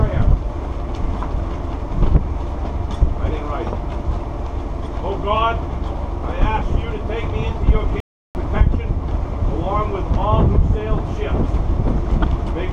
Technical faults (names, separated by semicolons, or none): playback stall